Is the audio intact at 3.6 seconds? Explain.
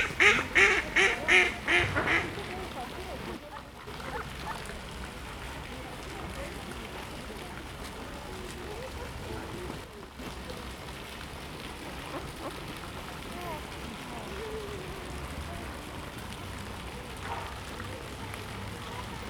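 No. From 3.37 to 3.87 s one channel drops out, most likely a stereo channel briefly lost before the mono sum. Material shared by both channels falls abruptly by about 6 dB, and anything present only in the missing channel vanishes, so the sound dips for half a second. On a waveform this shows as a sudden step down in amplitude with sharp edges. A spectrogram shows a uniformly dimmer band across all frequencies over that span.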